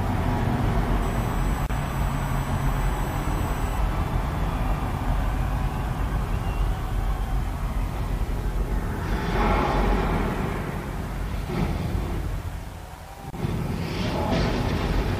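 From 1.02 to 3.79 s a USB whine sits under the sound: a steady tone at 1 kHz, strongest at its 8 kHz multiple, roughly 20 dB below the signal. Current drawn in the bus's 1 ms frames leaks through power or ground. Its high, fixed pitch separates it from low mains hum.

Inside that stretch, from 1.66 to 1.70 s, a 34 ms gap at a join of encoded pieces opens, and a second, 27 ms long, falls at 13.30 to 13.33 s. Separately encoded pieces were joined untrimmed, so the encoder's start-up silence and end padding remain. Unlike a dropout, the sound resumes exactly where it stopped, with smeared edges.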